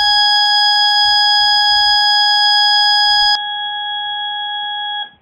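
Up to 3.35 s the music runs at its original, wider bandwidth, and then the character changes abruptly with no gap at the join. From there to the end the sound is dull and boxy, with nothing above 3.8 kHz, and it drops by roughly 10 dB. A new noise floor appears at around 35 dB below the signal. This is likely an input switched to a poorer device, a narrower-band microphone or headset path with its own tone, level and background noise.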